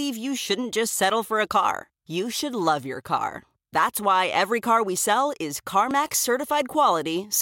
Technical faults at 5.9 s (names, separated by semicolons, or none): dropped buffer (overrun)